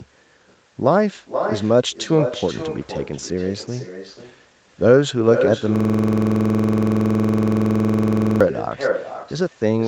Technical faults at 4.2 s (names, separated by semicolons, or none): echo with no canceller; clock drift between sender and receiver; repeated timing corrections